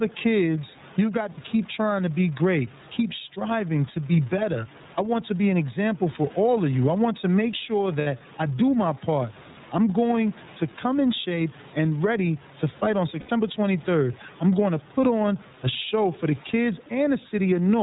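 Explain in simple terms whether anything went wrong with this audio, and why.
Several things went wrong. Throughout the recording, the level keeps rising and falling, and loud and soft parts sit oddly close together. The quiet room sound underneath is itself normal. This is gain pumping. The likely cause is a microphone turned up far too high, with an automatic level control repeatedly clamping it down by a large amount.

The whole clip also has a muffled, slightly rough, somewhat robotic quality, with none of the crisp top end of natural speech. That is the sound of the iLBC codec, a phone-call style compressor that keeps nothing above 4 kHz and rebuilds the voice in short chunks. Its damage is plainly audible here, and the chunks fit its 30 ms frame size.

Three brief glitches come from lost iLBC frames. At 1.32 s, between "kids you have got" and "keep trying to be", about 60 ms of audio is replaced by a short held sound, slightly buzzy or breathy. 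The same happens at 8.01 s, for about 60 ms, between "want to make sure" and "I do my part". At 13.19 s, right after "ready to fight on", the gap runs to about 90 ms. In each case the player filled the hole by repeating the last bit of voice. Because each chunk stands on its own, the voice returns cleanly right after.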